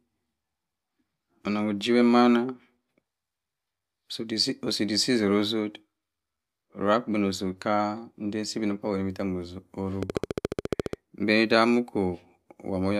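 From 10.03 s to 10.94 s a train of clicks runs over the speech: about fifteen near-identical pulses at a steady rate of 14.3 per second, heard as a fast, even ticking. The clicks peak well above the speech level, so they cut through clearly, including any gaps. Their uniform shape and regular spacing point to an external pulse source, likely electrical interference from nearby equipment or a faulty connection or power supply.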